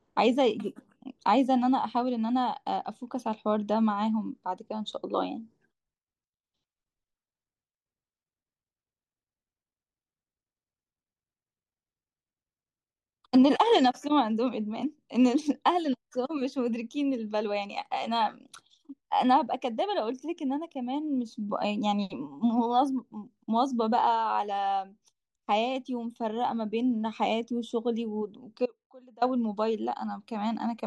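From 28.66 to 29.22 s the speech cuts abruptly to a faint residue about 25 dB down, an audio dropout likely from momentary signal loss.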